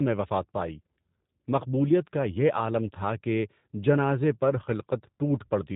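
Throughout, the speech sounds rough, slightly synthetic and dull, with nothing above 3.8 kHz: plainly audible G.729 codec damage, consistent with rebuilding speech at about 8 kbit/s.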